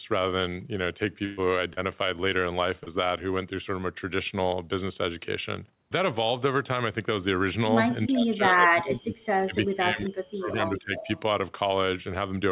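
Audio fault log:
1.25–1.40 s, burst of packet loss: About 120 ms of the speech never arrived. The receiver stretched the last sound over roughly 120 ms, fading it as it went. It becomes a held buzz or dying hiss. Speech then resumes further on, with that stretch gone.
1.73–1.84 s and 2.84–2.90 s, short concealed packet loss: Each time, about 30 ms of speech went missing. The receiver continued the previous sound, then blended back into the real audio. This gives a brief smear or wobble. Around 11 ms was also cut at the first spot.
8.09–11.10 s, speech suppressed in double talk: For about three seconds the speech dips and breaks up, at worst by about 30 dB. Both sides were likely talking at once, so the echo canceller turned everything down rather than risk passing echo.
10.97–11.21 s, echo leak: A faint delayed copy of the speech appears, about 15 dB below it and 357 ms late. A loudspeaker's sound likely slipped past the far end's echo canceller and came back down the line.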